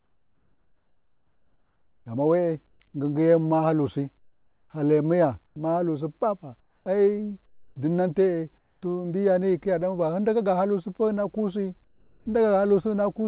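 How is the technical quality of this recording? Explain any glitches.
The pauses keep dropping into a smooth, featureless hiss, and the audio is band-limited to nothing above 4 kHz, as a narrowband call line would be.

Comfort noise in place of the background occurs at 0 to 2.06 s, 2.68 to 2.8 s (just before "ngingi yemu"), 4.18 to 4.7 s, 5.46 to 5.56 s, 6.6 to 6.86 s, 7.46 to 7.76 s, 8.58 to 8.82 s and 11.84 to 12.26 s. The textured background vanishes into steady flat noise, between about 1 and 12 dB quieter. The likely cause is the sender's voice detector halting transmission in silence and the receiver synthesising filler noise until speech resumes.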